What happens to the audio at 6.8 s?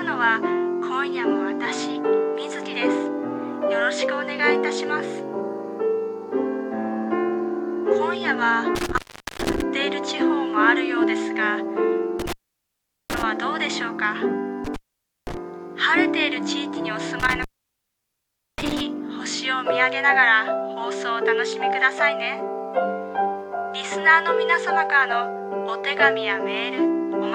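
Nothing goes wrong at 6.8 s; the audio plays through that moment intact, with no dropout, click or other fault.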